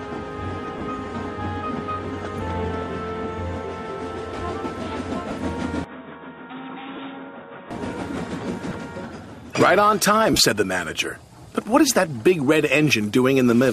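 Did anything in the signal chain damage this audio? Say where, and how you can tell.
Yes. Lost LE Audio frames hit the Bluetooth link and codec stage at 0.78, 5.28, 6.96 and 8.69 s, each a 22.5 ms noisy smear. At 10.33 to 10.40 s, 45 ms of dropouts are scattered over about 60 ms. The LC3 decoder fills each gap by repeating the last spectrum with random signs, so tones turn to hiss.

An input switch to a poorer device runs from 5.84 to 7.71 s, likely a device or driver routing change. There is no gap at the switch, but the sound suddenly turns dull, with nothing above 3.8 kHz. The level drops by about 10 dB, and a new noise floor sits roughly 30 dB below the signal.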